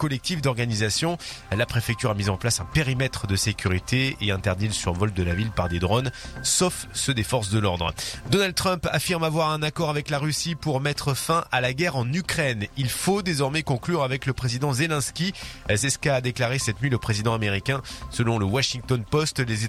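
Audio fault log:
No technical faults can be heard anywhere in the audio, with the signal holding steady and continuous throughout.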